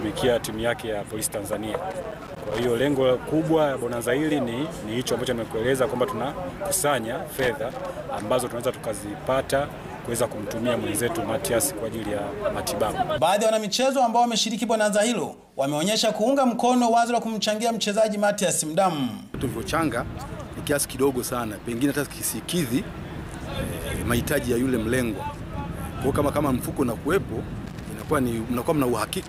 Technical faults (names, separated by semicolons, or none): loose connector crackle